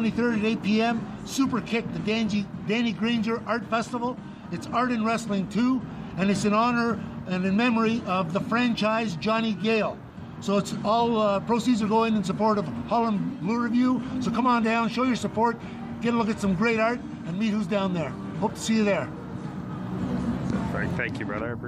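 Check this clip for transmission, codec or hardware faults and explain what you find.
Nothing in this audio stood out as a problem on listening.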